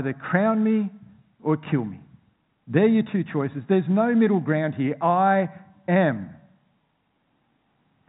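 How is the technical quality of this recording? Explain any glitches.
No glitches; telephone-band speech, nothing above 3.8 kHz.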